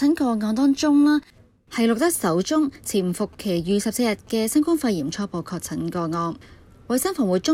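From 2.07 to 4.29 s, GSM signalling bursts from a nearby 2G phone are rectified into the audio as a galloping ticking with 217 Hz buzz, roughly 30 dB down. From 5.02 to 6.43 s, a Bluetooth SBC bit pool drop dulls the treble and adds gritty quantisation noise, consistent with the bit pool falling from 31 to 16, around 110 kbps.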